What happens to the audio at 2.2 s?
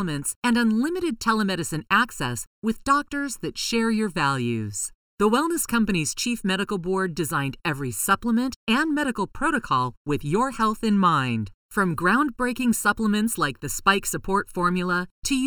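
At 2.2 s the speech sounds hollow and phasey, but nothing changes at that moment: the channel delay (comb filtering) runs through the whole clip. One channel arrives late by under a millisecond, and when the two are summed to mono, matching content cancels at evenly spaced frequencies, the first around 700 Hz. Unlike a low-pass filter's dullness, the notches repeat up the spectrum and keep the top end. Unlike reverb, they add no tail.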